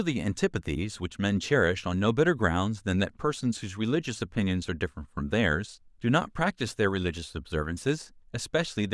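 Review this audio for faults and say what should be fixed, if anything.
Nothing here needs fixing; no faults are audible.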